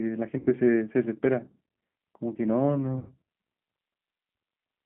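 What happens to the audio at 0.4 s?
VoIP packet loss concealed by the speech codec runs from 0.39 to 0.48 s. The decoder extends its last pitch and filter with falling gain, so roughly 70 ms of missing sound becomes a fading, buzzy tone or coloured noise. The sound stays weak or distorted for tens of milliseconds or more afterwards. The G.729 codec also affects this moment, as it does the whole clip. The line is confined to 150 Hz to 3.5 kHz. The pulse-based rebuilding, which fits an 8 kbit/s codec, makes the sound plainly rough and synthetic.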